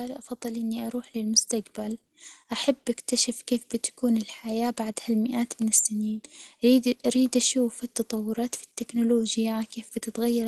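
From 0.41 s to 2.81 s the speech and the background noise swell together, climbing about 6 dB before "أكتشف كيف بتكون الحياة". This is automatic gain rising: the gain control judged the input too quiet and raised its gain gradually over those 2.4 seconds.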